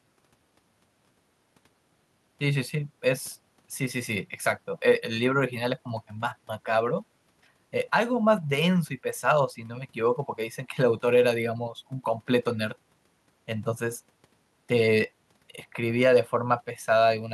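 No dropouts, clipping, distortion, timing errors or other technical faults can be heard anywhere in the speech.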